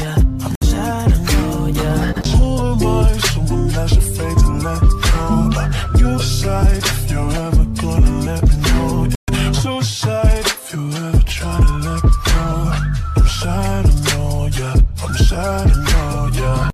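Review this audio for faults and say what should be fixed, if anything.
Bluetooth dropout at 0.55 to 0.63 s and 9.15 to 9.30 s: the audio cuts to silence, then resumes further along rather than where it stopped. This is likely late wireless packets being discarded, with the missing stretches fitting about 64 ms and 128 ms of lost audio. Keeping the headphones close to the source, away from Wi-Fi and other 2.4 GHz traffic, or using a wired connection would prevent it.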